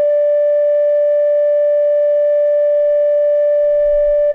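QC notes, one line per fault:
Nothing stood out on listening to this music.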